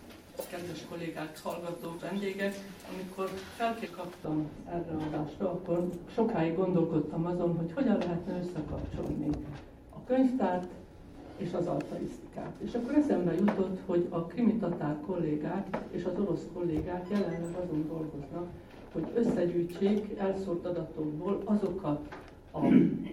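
The decoder drops whole compressed frames three times, so the audio leaps forward. At 1.98 s and 3.85 s the jump is about a fifth of a second, roughly ten frames. At 5.12 s it is closer to half a second. From 4.2 s to the end, de-emphasis is applied wrongly: a treble cut falls smoothly to about 11 dB down at 10 kHz relative to 1 kHz, leaving the audio dull and muffled.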